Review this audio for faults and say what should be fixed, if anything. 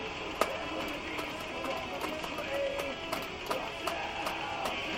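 At 1.51 to 1.53 s the sound jumps abruptly forward with no gap, as though roughly 0.7 s were cut out and the two sides spliced together. This skip ahead happens when a stretch of audio is discarded, in transit or by an overflowing jitter buffer, while later audio is already queued. Sizing the jitter buffer adaptively and draining it gradually rather than dropping whole chunks would prevent it.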